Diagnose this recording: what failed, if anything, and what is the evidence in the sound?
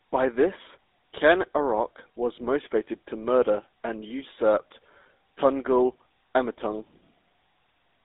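The codec stage failed: the GSM full-rate codec runs throughout, confining the speech to roughly 250 Hz to 3.7 kHz and adding a buzzy, gravelly roughness. A plain narrowband line would sound thin but clean. This coarse, pulse-driven excitation fits GSM's 13 kbps coding.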